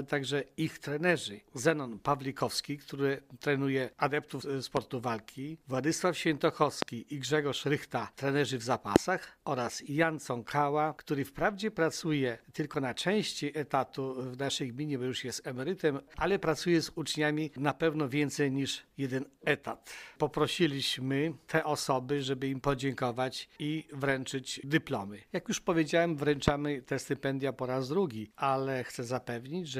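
A loud pop lands at 4.77 to 4.79 s, about 20 dB above the sound. Three more follow, at 6.82 to 6.84 s, 8.96 to 8.98 s and 26.48 to 26.50 s, each about 25 dB above it. Each is a single sharp crack, around 20 ms long. The audio carries on beneath it. The likely cause is a sudden voltage step, such as static or a switching glitch, added to the signal and shaped by the circuits after it.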